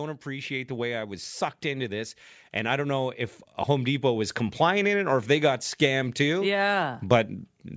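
From 0.23 to 5.02 s, automatic gain rising: the level creeps up about 8 dB, voice and background swelling together, unlike a sudden jump, before "or if they got".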